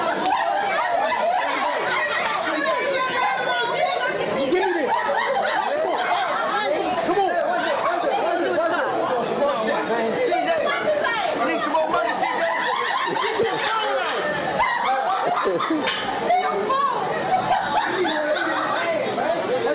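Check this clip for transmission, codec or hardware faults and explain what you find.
No transmission, codec or hardware faults turn up in this clip, and the call path's G.711 codec simply leaves nothing above 4 kHz.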